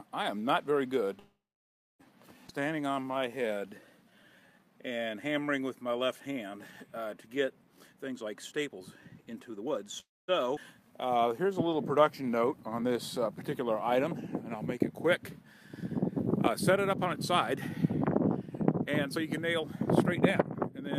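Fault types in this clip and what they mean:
call audio freeze: Packets were likely held up and the jitter buffer ran dry, so the receiver filled the wait. From 1.19 s the sound stalls for about 0.8 s, mostly silent for 0.62 s, and from 10.0 s for about 0.28 s. Nothing is lost; playback resumes where it stopped.
skip ahead: A stretch of audio was discarded while later audio was already queued, so playback jumps straight over it. At 2.47 s roughly 0.3 s vanishes, and at 10.56 s roughly 0.2 s, each joined almost seamlessly, with only a few milliseconds of fill at the seam.
jitter buffer slow-down: With its reserve running low, the buffer stretched the audio by repeating tiny pitch-period-sized pieces. From 2.53 to 5.41 s the sound plays at 88% speed, adding 342 ms, and from 10.81 to 12.93 s at 91%, adding 203 ms. The sound is drawn out but keeps its pitch.
jitter buffer speed-up: Holding more audio than its target delay, the buffer cut many short pitch-period pieces to catch up. 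From 7.74 to 9.86 s the sound runs at 129% speed, shedding roughly 0.7 s and sounding hurried. From 17.07 to 20.90 s it runs at a milder 104%.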